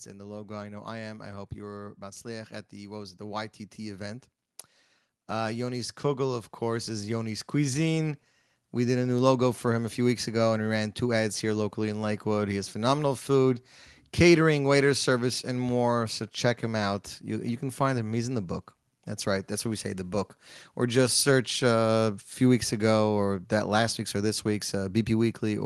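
A speech recording with an automatic gain rising fault. From 0.12 s to about 9.03 s, the level climbs steadily by about 13 dB. Voice and background noise swell together, so the room gets louder along with the talker. The rise settles just before "new logo for him". An automatic gain control judged the input too quiet and raised its gain slowly. The audio also passed through a call path, and its top end stops near 12 kHz.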